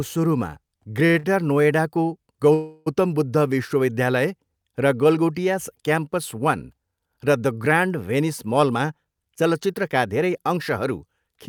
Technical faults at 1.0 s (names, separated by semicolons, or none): repeated stalls (stutter)